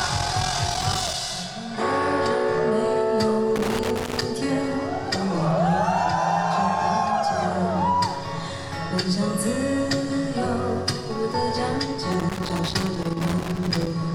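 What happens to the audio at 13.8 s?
Loose connector crackle is running at 13.8 s, near the end of a burst that spans 12.12 to 13.91 s. A worn or dirty contact in the signal path is touching and separating in quick, uneven succession, so the audio keeps cutting in and out. Any DC on the line turns each break into a pop. The result is an irregular scratching crackle over the sound, which stops just after 13.9 s.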